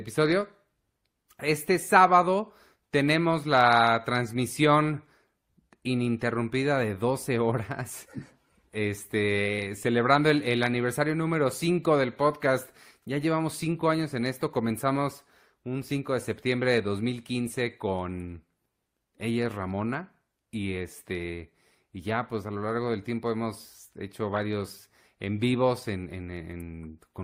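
Brief glitches mar the speech at 24.36–24.39 s, after "del tiempo hemos hecho", and more faintly at 25.79–25.84 s: a corrupt frame decoded, with damaged compressed frames played anyway.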